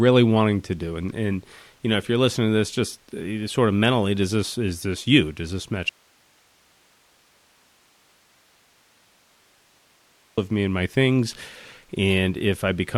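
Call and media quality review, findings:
Audio dropout to a faint residue, 5.89 to 10.38 s: speech cuts out abruptly for about 4.5 s, leaving only hiss roughly 40 dB below normal level, then resumes at "of me and my". Likely upstream signal loss while the downstream path stayed live, passing its own noise.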